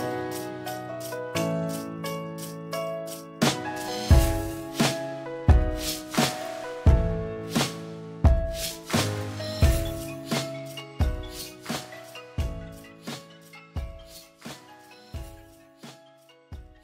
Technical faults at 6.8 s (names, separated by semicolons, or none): periodic clock jitter